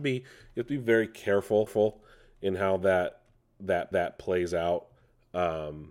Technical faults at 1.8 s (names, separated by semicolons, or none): overlapping chunks